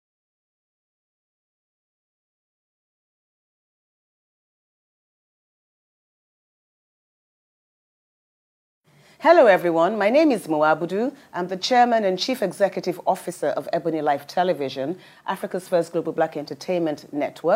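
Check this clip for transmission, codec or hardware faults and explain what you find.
No transmission, codec or hardware faults detected on listening; nothing to report.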